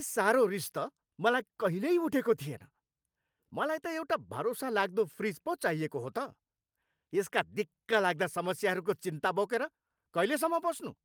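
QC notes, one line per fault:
No faults heard in this speech clip.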